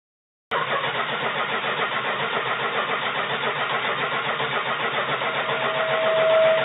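A cut-off start runs from 0.00 to 0.51 s: the capture began late, so digital silence gives way abruptly to sound already in progress, with no natural attack. A loudspeaker feedback squeal begins at 4.91 s and continues to the end. The microphone re-captures its own loudspeaker, and a 644 Hz tone grows over roughly a second and a half until it sits around 10 dB above the programme. Everything passes through a narrow band with nothing above 4 kHz, which fits a G.711 call codec.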